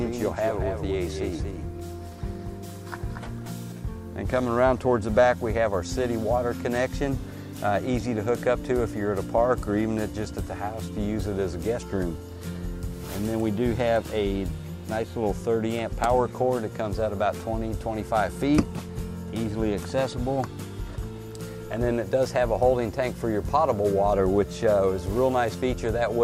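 From the very start until 3.72 s, a doubled audio track is audible: a second, full-band copy of the sound trails the original by about a fifth of a second, somewhat quieter, with no decay or room colour. The likely cause is the audio being picked up again by a slower path. On a waveform every onset appears twice at a fixed spacing; a spectrogram shows each event repeated identically, and the copy vanishes abruptly at 3.72 s.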